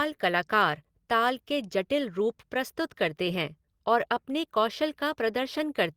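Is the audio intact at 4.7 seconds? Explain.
No. At 4.7 seconds the speech sits inside a stretch of repeated timing corrections running from 0.06 to 5.66 s. The receiver repeats short pieces to keep pace, stretching the audio to 98% speed and adding around a tenth of a second overall. This is heard as faint hiccups and a slightly dragging tempo. On a waveform, small duplicated segments appear at uneven spacing. A spectrogram shows brief repeated frames or tiny seams.

The cause is clock drift between sender and receiver. Because the sender's clock runs roughly 1.5% slow, the jitter buffer keeps draining and the receiver has to pad it with repeats, all in the same direction. The corrections keep the pitch unchanged, so the spectrogram's harmonic lines stay level while the timing wobbles slightly.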